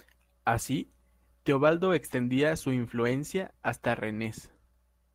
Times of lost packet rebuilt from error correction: 2.07-2.21

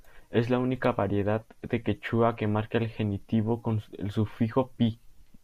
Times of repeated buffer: none

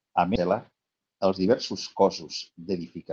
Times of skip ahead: 0.35-0.37

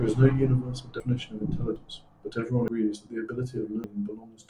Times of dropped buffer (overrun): 1.00, 1.76, 2.68, 3.84

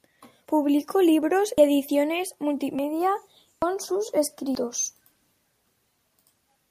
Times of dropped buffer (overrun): 1.58, 2.79, 3.62, 4.55

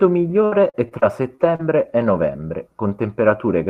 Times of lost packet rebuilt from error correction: 2.01-2.03

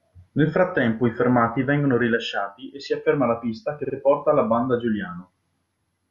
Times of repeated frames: 3.84-3.95

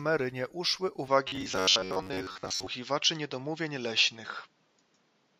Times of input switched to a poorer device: 1.08-5.40

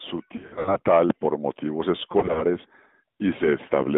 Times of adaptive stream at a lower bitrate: none

